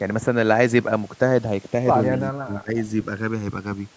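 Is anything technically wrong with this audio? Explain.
Yes. Two faults can be heard.

The channels drift apart for the whole clip. The two sides seem to run on separate clocks, off by a few hundred parts per million. The delay between them grows to about a millisecond by the end. When the channels are summed to mono, the comb-filter notches move slowly across the spectrum. The speech takes on a slow, sweeping flanging.

From 2.29 to 2.76 s, the speech is suppressed. The level drops sharply, by as much as about 25 dB. This is likely speech suppressed in double talk. The echo canceller would have heard both sides at once. It could not tell the talker from the loudspeaker echo, so it turned the speech down. The call microphone processing also limits the audio to 8 kHz and below.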